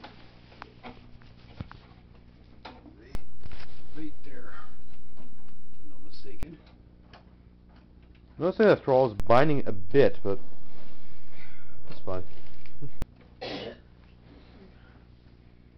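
Low thumps land at 3.15 s and 6.43 s, and again at 9.20 s and 13.02 s: two DC steps, where the waveform's zero line jumps by about -20 dBFS, then about -19 dBFS, holds, and snaps back, with the sound above it continuing unchanged.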